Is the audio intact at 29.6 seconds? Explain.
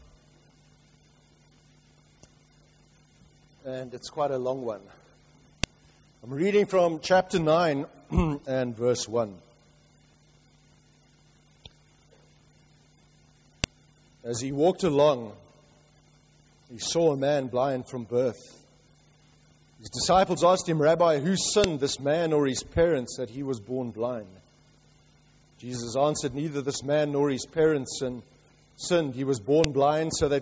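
No. At 29.64 s, where one piece of audio was joined to the next, the new piece's WAV header was left in the stream instead of being stripped, so a few dozen bytes of file metadata play back as if they were samples. This is a file header played as audio. Because those bytes bear no relation to the surrounding waveform, they come out as a single sharp, loud click or snap, lasting only a couple of milliseconds.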